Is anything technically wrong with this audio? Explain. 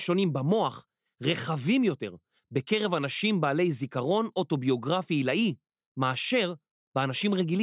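No, nothing technically wrong can be heard in this speech clip. The recording is steady throughout, with no audible glitches or interruptions.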